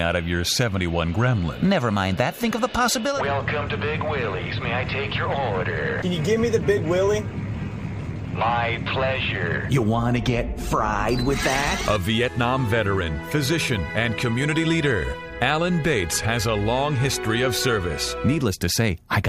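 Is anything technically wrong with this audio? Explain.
No, nothing in this audio stood out as technically wrong on listening.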